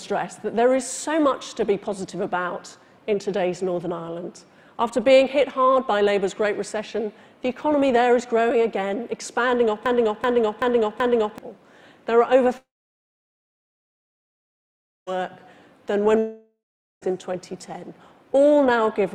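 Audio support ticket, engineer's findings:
Broken-record loop, 9.86 to 11.38 s: a 0.38 s fragment repeats exactly four times back to back. Likely a stalled player or decoder re-serving its last buffer. The waveform shows four identical tiled blocks, and the spectrogram shows a repeating stripe pattern. The intended audio for that span is lost.

Long network dropout, 12.57 to 15.09 s: about 2.5 s of audio never arrived. The receiver briefly extends the last sound as a fading buzz or hiss, then leaves about 2.4 s of silence. On the spectrogram, a short smeared tail runs into a blank band. The likely cause is a network outage, after which playback resumes past the gap.

Long network dropout, 16.19 to 17.04 s: about 0.84 s is missing. The concealment fill fades over the first half, leaving about 0.45 s of silence. The waveform shows a decaying envelope dropping to flat, likely from a second, shorter link outage.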